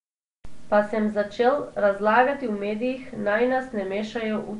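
Nellymoser compression runs through the whole clip, with plainly audible damage: the speech carries a rough, hissy halo and a smeared, underwater blur. Nothing is present above 10.6 kHz. The sound is likely the Flash-era Nellymoser Asao codec, at a rate that fits about 44 kbps. It codes short fixed blocks on a tight bit budget. Bands judged too weak receive no bits and are refilled with noise, which produces the hiss and smearing.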